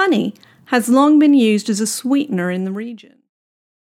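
No technical faults can be heard in the speech, and the level eases down in an ordinary smooth fade-out that begins at around two seconds and is complete by 3.31 s.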